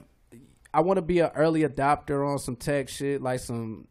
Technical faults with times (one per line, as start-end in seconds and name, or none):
none